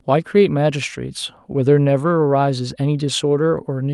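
No technical faults are audible.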